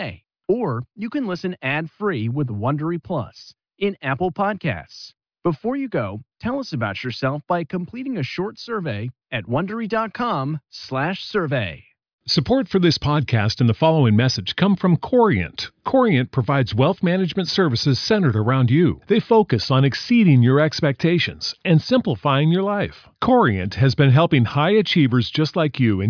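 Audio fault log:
No fault was heard in this speech clip. Nothing in the recording called for an entry in this log.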